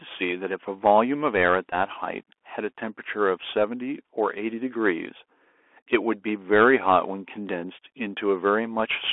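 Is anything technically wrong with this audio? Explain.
Yes, two faults are audible in this speech clip.

Throughout, the speech sounds boxed-in and gritty, with scratchy s sounds, harsh peaks on loud bright sounds and a granular hiss underneath. This is the Bluetooth CVSD headset codec: the band spans only about 300 Hz to 3.4 kHz, and a one-bit up-or-down coder, which fits a 64 kbps link, cannot follow fast rises.

From 1.70 to 1.74 s there is a short, steady buzz pitched near 267 Hz. This is a Bluetooth headset packet repeated: about 19 ms of audio, pointing to roughly five lost packets, was filled by decoding the last good 3.75 ms packet over and over.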